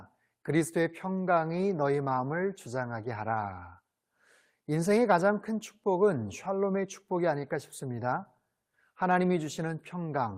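No technical faults are audible.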